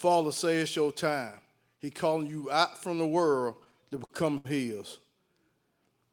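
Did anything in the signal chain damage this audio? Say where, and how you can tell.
Yes. Just after "out from the world", between 3.53 and 4.47 s, the speech catches and drags in eight short stalls, each holding the last sound and the longest running about 71 ms, with the held tail fading in the longer waits. This is repeated stalls (stutter) at the network stage: packets arrived late or too slowly, so the jitter buffer kept running dry. The receiver filled about 166 ms, roughly a fifth of that stretch, and nothing was lost.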